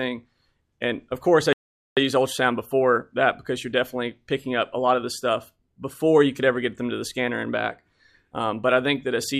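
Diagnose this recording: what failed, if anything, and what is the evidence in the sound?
Playback stall at the playback stage: the sound cuts out mid-flow from 1.53 to 1.97 s, a 0.44 s gap, likely the player starving for data or its thread blocking.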